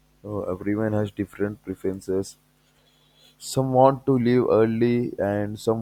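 Nothing in this speech recording stood out as a technical problem on listening.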